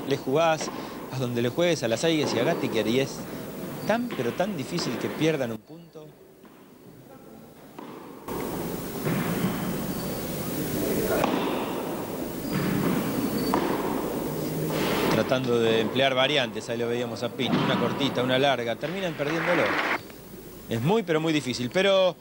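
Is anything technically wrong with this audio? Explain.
Yes. There is a sudden gain jump from 5.56 s to 8.28 s. The level drops by about 14 dB at once, and the background noise falls with it. It snaps back at 8.28 s. A gain setting likely changed between samples with no ramp.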